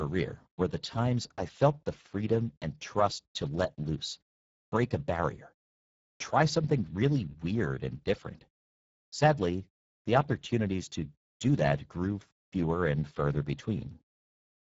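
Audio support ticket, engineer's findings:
Speex codec artefacts throughout, speech audibly hoarse and noisy. Low-rate CELP encoding starving the excitation, consistent with a setting near 10 kbps. Band empty above 7.7 kHz; upper band sounds like shaped noise fill, not real detail.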